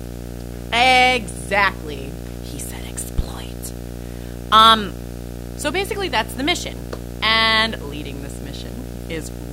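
From start to finish the speech sits on a video or display buzz, a hard, rasping hum at 60 Hz with a layer of hash above it. A screen or video cable is coupling its vertical scanning energy into the audio path, so the picture's field rate ends up in the signal as a buzz rich in harmonics. It runs only roughly 10 dB below the speech, under every phrase and in every pause.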